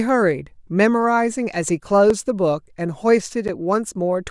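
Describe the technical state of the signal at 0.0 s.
At 0.0 s the speech signal is intact, with no fault present at that moment.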